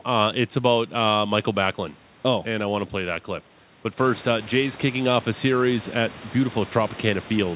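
Listening through this speech recording, nothing stood out as a technical problem; the room's background noise grows by about 14 dB at roughly 4 s but stays about 20 dB below the speech, and the call path's narrowband sound, with nothing above 4 kHz, is what a G.711 connection normally gives.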